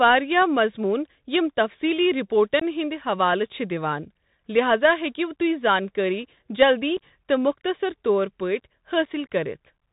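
From the first moment the speech carries the narrowband sound of the Bluetooth CVSD headset codec: the 64 kHz one-bit delta modulation passes nothing above 4 kHz, s sounds come out scratchy, and a granular hiss sits under everything. That steady granular grit, rather than a muffled lowpass, points to CVSD.

Unconcealed Bluetooth headset packet loss then cuts three abrupt holes. At 2.60 s, right after "یِم تَفصیٖلی", about 19 ms drops out, a handful of packets. Shorter gaps of about 7.5 ms, a couple of packets each, follow at 6.97 s and 9.05 s. Each hole has abrupt edges and the sound returns briefly quieter, unlike the smoothed fill of concealed loss.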